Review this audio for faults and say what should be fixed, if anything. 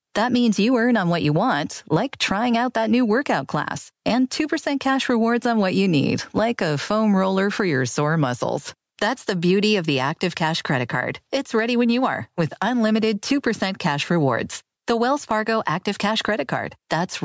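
Throughout the speech the level rides up and down by around 15 dB. Loud and quiet passages sit unnaturally close together, giving a squashed, pumping sound. The likely cause is gain pumping, with the microphone gain set far too high so that a fast limiter or compressor clamps down on each peak and releases in the gaps. The call's microphone processing also trims the lowest bass and leaves nothing above 8 kHz. To prevent the pumping, lower the input gain at the source so the limiter rarely has to engage.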